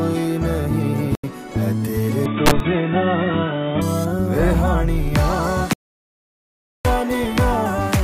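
At 1.15 s a corrupt frame is muted: the decoder rejected damaged compressed data, leaving an abrupt 86 ms hole consistent with about three frame lengths, with timing preserved.

From 2.26 s to 3.82 s the band narrows, with nothing above 3.8 kHz and a faint new noise floor. The level stays steady and there is no gap at the changeover, likely from the input having switched to a poorer device.

Inside that stretch, from 2.45 s to 2.60 s, a corrupt FLAC frame makes the predictor run on wrong values. It produces an error peaking at about -6 dBFS across roughly two frames.

From 5.73 s to 6.85 s there is an audio dropout to silence. For 1.12 s the sound cuts to silence with no room tone, likely because the input was lost while recording continued.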